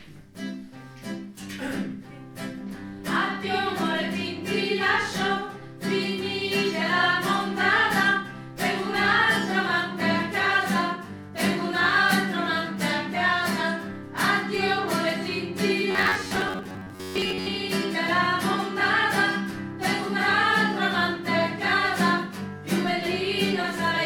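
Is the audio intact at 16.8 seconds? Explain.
No. From 15.91 to 17.47 s the sound turns into a robotic sound from repeated short buffers, a rigid buzz near 94 Hz, likely from roughly 11 ms chunks being looped while most real audio is skipped.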